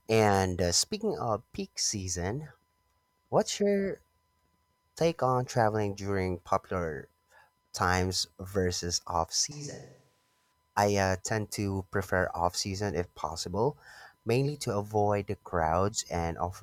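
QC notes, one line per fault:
9.52–10.52 s, switch to a distant microphone: speech turns suddenly roomy, thin and around 5 dB quieter, likely from a farther mic. The waveform steps down, and the spectrogram loses bass and shows a higher noise floor.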